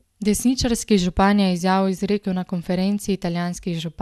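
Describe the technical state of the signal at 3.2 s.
At 3.2 s the speech sounds swirly, hollow and smeared, with blurred consonant attacks and nothing above 12.6 kHz. This runs through the whole clip and is likely generation loss: around seven passes through a lossy codec, consistent with MP2 at 128 kbit/s, each requantising on a shifted frame grid so that noise accumulates.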